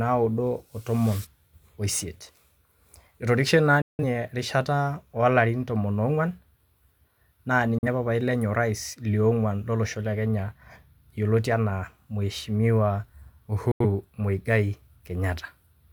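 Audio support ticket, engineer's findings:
Digital broadcast dropout in the speech, three mutes: 3.82–4.04 s, 7.78–7.87 s, 13.71–13.85 s. Roughly 170, 43 and 85 ms of programme gone, which fits four, one and two lost frames of about 43 ms each. Probable component: receiver/decoder muting on lost signal or failed frame checksums. Each cut fades out in about 3 ms and speech resumes later in the programme. Waveform shows flat-line gaps. Spectrogram shows full-band vertical blank columns with hard edges.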